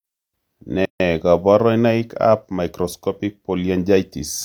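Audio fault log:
0.85–1.00 s, gap at a join of encoded pieces: the speech stops dead for about 148 ms and then resumes exactly where it left off, with nothing lost. The edges are abrupt but softened by the codec. The audio was encoded in separate pieces, here about 4.0 s long, and joined without trimming. The encoder's start-up delay and the padding on the previous piece's final frame both remain as silence at the seam.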